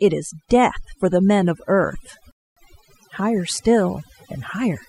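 Across the whole speech clip there is overdone noise removal: a noise reducer pushed too hard has pulled individual frequency bands down or out whenever they came close to its noise estimate, taking the softer parts of the voice with them. The background drops and breaks up into twinkling specks. On a spectrogram this shows as a dark, gappy floor scattered with isolated bright flecks, and ragged, holey harmonics.

From 2.31 to 2.57 s a rebuffering stall cuts the sound to silence for about 0.25 s. The player ran dry of downloaded audio, waited for more, then picked up exactly where it had paused, so nothing is missing but the pause adds time. The waveform drops to a flat line for that stretch and then resumes, and the spectrogram shows a clean vertical blank band.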